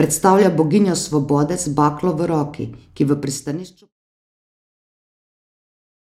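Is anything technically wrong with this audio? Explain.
No, the speech signal shows no technical fault, and its level simply tapers in a smooth editorial fade-out that begins around 3 s and reaches silence at 3.94 s without any click or hard edge.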